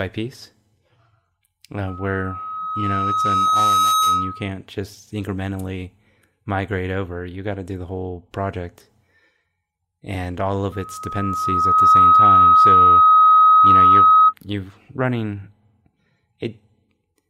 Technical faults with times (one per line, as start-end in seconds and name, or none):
1.87-4.50 loudspeaker feedback squeal
10.72-14.34 loudspeaker feedback squeal